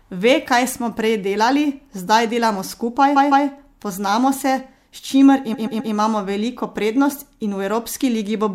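Repeated frames at 3.15 s to 3.46 s and again at 5.53 s to 5.92 s: a short run of compressed speech was sent to the decoder more than once, so it replays the same slice. First, a 157 ms block plays two extra times, adding about 0.31 s. Then a 131 ms block plays three extra times, adding about 0.39 s. Each is heard as a stutter.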